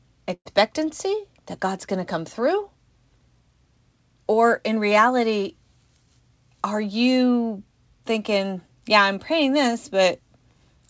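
From 0.34 to 0.47 s there is a burst of packet loss: about 120 ms of speech never arrived, so the receiver stretched the last received sound to fill the gap, turning it into a held buzz or hiss that fades and ends in about 60 ms of silence. Speech then resumes further on, with that stretch missing. On a spectrogram, which is empty above 8 kHz throughout as expected for the G.722 call path, the gap appears as a smeared continuation of the last sound that dims to a blank column. On the waveform, the envelope tapers to flat before the speech resumes abruptly.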